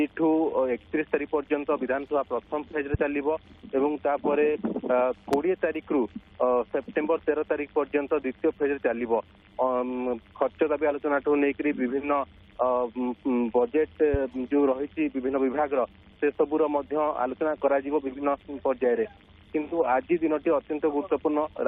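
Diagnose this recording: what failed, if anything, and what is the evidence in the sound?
Three loud pops cut through the audio as short, sharp thumps at 2.94–2.97 s, 5.33–5.36 s and 14.14–14.17 s, each lasting under 30 ms and standing well above the surrounding level, the middle one the strongest at roughly 15 dB over the signal. The sound carries on underneath each one. The failure is likely in the analogue wiring, where a loose plug, switch contact or static discharge injects a voltage step that the downstream circuitry turns into a brief pulse.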